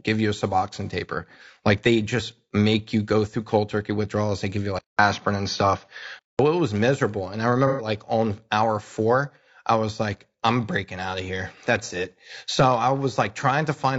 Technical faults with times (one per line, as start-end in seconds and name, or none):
0.00-13.99 low-delay AAC compression
4.79-6.39 input switched to a poorer device
5.99-6.04 AAC frame loss with concealment
7.67-7.88 AAC frame loss with concealment